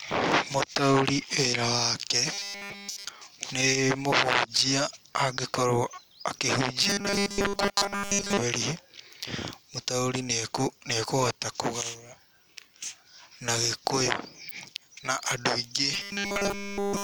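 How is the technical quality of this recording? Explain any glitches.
The speech breaks up three times into robotic sound from repeated short buffers: 2.33 to 3.09 s, 6.83 to 8.38 s, and 15.94 s through to the end at 17.03 s. In each stretch essentially everything you hear is repetition, a rigid metallic buzz pitched at 200 Hz that only loosely tracks the speech. That pitch fits a roughly 5 ms chunk being looped. The likely cause is audio arriving too seldom, with the playback side refilling gaps by repeating its last short buffer while the real signal gets skipped.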